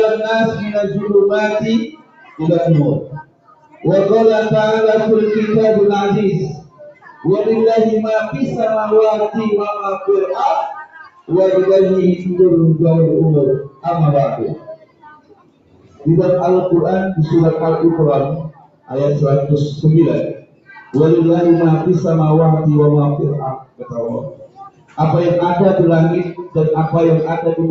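A speech-oriented noise suppressor has been left running on this audio, and it treats sustained, non-speech content as noise to be removed. Across the whole clip, the gain it applies rides up and down by something like 15 dB. Attacks come through while held material and decay tails are pulled down, so the level pumps and the sound thins out. The call path's band limit, with nothing above 8 kHz, sits underneath all of this.

The clearest damage is where the suppressor cuts the sound outright, pulling it down by up to about 20 dB. This happens at 1.81–3.85 s, 6.48–7.26 s, 8.27–8.55 s (a shallower dip of about 9 dB), 9.98–11.31 s, 13.59–16.07 s, 18.4–20.94 s, 23.55–24.99 s and 26.31–26.57 s (about 15 dB). In the longer spans, sustained portions sink for a second or more.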